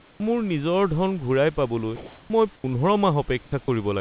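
Speech, band-limited to nothing above 4 kHz in a way that points to a G.711 call path, with three stretches of comfort noise in place of the background, likely from discontinuous transmission. At 0.0–0.2 s the noise sits about 8 dB below the room background, at 1.96–2.3 s about 3 dB above it, and at 3.42–3.52 s about 3 dB below. On a spectrogram these stretches show as flat, featureless grey bands with level steps at their edges. The onset before "মোৰ নিজৰ ধন" is clipped by the voice detector, likely because it triggered late: about 30 ms at 0.17–0.2 s is missing, so the waveform jumps from noise straight into the speech with no rising edge. Sound dropped by the voice detector follows "পাবলৈ মই" at 2.56–2.64 s and again at 3.64–3.68 s, likely because the sound was taken for background. Each gap appears as a short notch of steady noise cutting into the speech trace.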